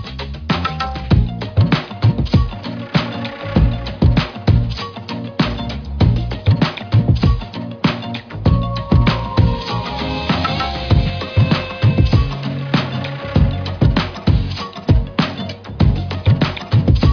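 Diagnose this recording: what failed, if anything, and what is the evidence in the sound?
Nothing in the signal chain has failed; from wiring and conversion through processing, transmission and playback, every stage carries the audio without any audible technical fault.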